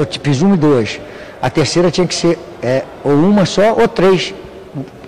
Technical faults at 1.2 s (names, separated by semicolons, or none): hard clipping